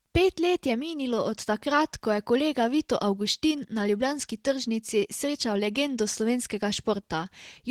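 It's a speech clip with Opus voice compression damage running the whole way through, and it's plainly audible. The hoarse, slightly synthetic texture sounds like the hybrid setup, with the linear-prediction coder handling the lower band and a transform layer filling in above 8 kHz at full bandwidth. The coarse excitation coding fits a bitrate around 16 kbps, probably with 20 ms frames, so there just aren't enough bits to keep the speech clean.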